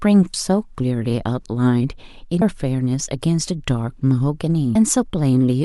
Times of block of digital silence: none

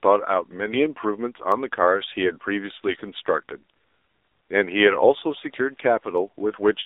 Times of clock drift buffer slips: 1.52-6.18

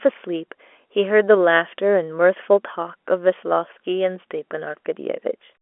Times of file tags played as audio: none

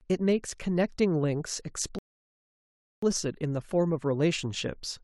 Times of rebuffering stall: 1.99-3.03

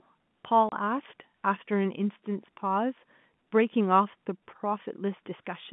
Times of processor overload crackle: none

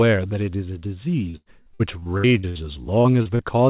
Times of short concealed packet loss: 3.01-3.41

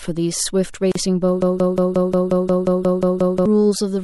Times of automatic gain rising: none

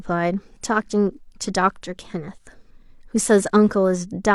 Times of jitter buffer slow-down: none

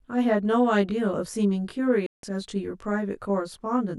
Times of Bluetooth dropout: 2.06-2.23

